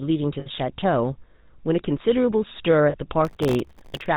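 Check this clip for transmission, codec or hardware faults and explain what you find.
Three faults are present: a narrowband codec coloring the whole clip, two short dropouts, and a late burst of crackle.

Throughout the speech there is a buzzy, gravelly roughness, and nothing comes through above 4 kHz, so the sound is muffled and grainy. That is the GSM full-rate codec. It rebuilds the voice from a vocal-tract model driven by regularly spaced pulses, keeping only a thinned-out excitation. The coarse pulse train is what makes the voice rasp. The damage is plainly audible and fits the 13 kbps full-rate coder.

At 0.40 to 0.47 s and again at 2.90 to 2.96 s, the sound briefly freezes into a rough, metallic ring instead of moving on. These are lost GSM frames. The decoder had no good data, so it reused the settings of the last good frame. The first gap lasts about 60 ms, which points to roughly three missing frames. 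The second lasts about 40 ms, likely two frames.

From 3.25 to 4.06 s a gritty crackling tears across the speech, then stops. This is processor overload crackle. The processor repeatedly failed to deliver its audio buffers on time, and each missed deadline left a tiny hard-edged hole of silence. The holes point to very short buffers of under a millisecond each, with dozens missed in a row. Strung together over this 0.8 s stretch, they are heard as continuous crackle until the load eases.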